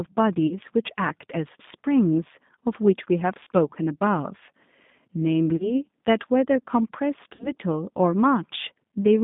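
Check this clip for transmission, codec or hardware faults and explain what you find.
Two problems here, one that runs the whole way through and one that comes and goes.

The whole clip has been through the G.729 codec, and it's plainly audible. The speech sits in a narrow telephone band, roughly 150 Hz to 3.7 kHz, with nothing above that. The texture is slightly rough and synthetic, which fits an 8 kbit/s coder. Instead of sending the actual waveform, it rebuilds the voice from a vocal-tract filter, a pitch predictor and a handful of pulses per frame.

Then there's VoIP packet loss concealed by the speech codec, at 0.47–0.59, 3.43–3.48, 5.56–5.75 and 7.35–7.51 s. Each dropout loses about 40 ms of audio, which would fit a couple of 20 ms packets going missing. The decoder covers each gap by extrapolating from its last pitch and filter settings, so the voice smears into a buzzy tone or coloured noise that fades. 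Because every frame builds on the one before, the sound stays weak or distorted for a short stretch after each gap, rather than snapping straight back.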